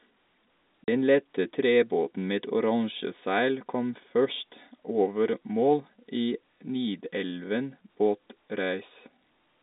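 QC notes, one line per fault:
0.84–0.88 s, packet loss filled with silence: a 40 ms hole cuts the speech off dead and it resumes just as abruptly, with hard edges where the waveform jumps to and from zero. The length fits two lost 20 ms packets. Unlike concealed loss, nothing is smeared or repeated to fill the gap. Unlike a level dropout, it is total silence, not just quieter sound, and stays inside the 250 Hz to 3.7 kHz telephone band.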